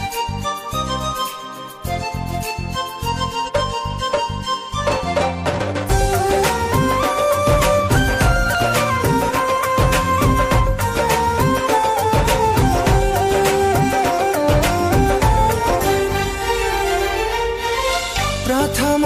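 Damaged data in a compressed stream at 1.21–1.26, 3.44–3.50, 5.86–5.91, 8.55 and 15.65–15.71 s: corrupted frames make the decoder lose sync, giving brief glitches while it searches for the next frame header.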